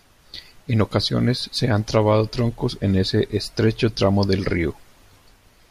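Periodic USB or driver dropouts run from about 0.64 s to 5.65 s, one every 1.0 s, around seven in all. At each one, something in the system briefly stalled the audio path and a tiny sliver of the speech, a small fraction of a millisecond, was skipped outright rather than filled with silence. The waveform jumps across the gap, so each loss comes through as a regularly spaced tick, audible only where the speech carries signal.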